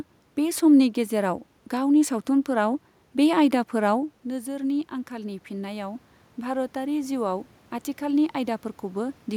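Speech in which, from 4.27 to 7.52 s, the voice and the room noise behind it slowly swell together by about 5 dB. This is automatic gain rising: the talker moved away around 4 s, dropping the input about 11 dB, and the gain crept up to compensate.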